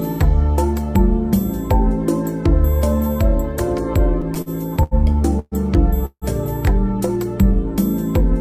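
From 4.21 to 4.94 s the audio shows repeated stalls (stutter): five short gaps, the longest 80 ms, are filled by continuing the last sound, so it drags without losing anything.

Call audio freezes follow at 5.39–5.55 s and 6.06–6.25 s, each likely caused by held-up packets draining the jitter buffer. The sound is sustained, fades to brief silence, then resumes where it stopped, about 0.12 s and 0.16 s later.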